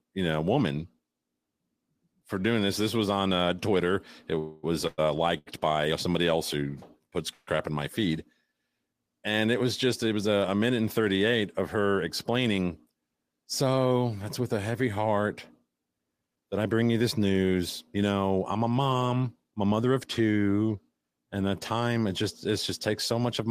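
Repeated stalls (stutter) run from 4.35 to 5.48 s. Packets arrived late or too slowly, emptying the jitter buffer three times, and the receiver stretched the last sound over about 203 ms in all (longest gap 109 ms). Nothing is lost, but the sound drags and stutters.

A call audio freeze sits inside that stretch, from 4.39 to 4.65 s, and another from 7.33 to 7.49 s. Each holds the last sound as a fading buzz for 244 ms and 139 ms without reaching silence, likely because packets were held up. The audio then resumes where it stopped.

Jitter buffer speed-up follows from 10.78 to 12.59 s at 102% speed, and from 18.71 to 19.86 s at 110%. To shrink an overfull buffer, the receiver cut short pitch-period pieces, roughly 40 ms and about 100 ms in total. Pitch holds, but the second stretch sounds noticeably hurried.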